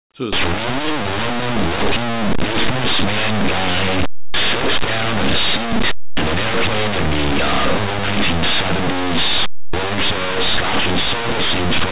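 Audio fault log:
0.33–11.92 s, linear audio read as companded: from a third of a second in to the end, the speech turns into harsh, buzzing distortion, loud even where the talker should be quiet. This points to plain linear 8-bit samples being expanded as mu-law codes: samples just to one side of zero map to the largest mu-law outputs while the other side stays small, so small signals become huge and lopsided.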